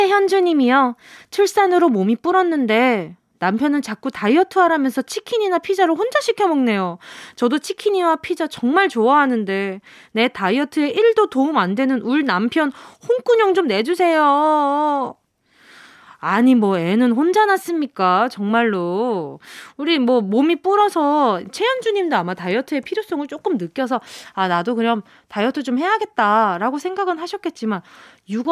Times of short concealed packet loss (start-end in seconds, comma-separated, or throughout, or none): none